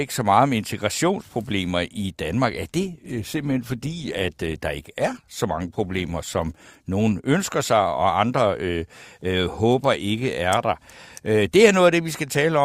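Speech, with an adaptive stream dropping to a lower bitrate from 2.80 to 6.80 s: the quality abruptly drops, with heavier codec artefacts, then recovers without any gap, which fits a switch from roughly 64 to 24 kbit/s Opus.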